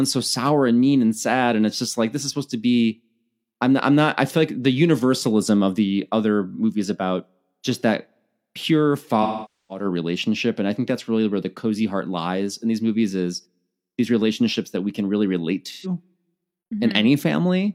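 AAC frame loss with concealment at 9.22–9.85 s, after "about just that pure", and 15.71–15.93 s, after "we can really relate": the decoder rebuilds the missing frames from the last good spectrum, leaving a smeared, noisy patch.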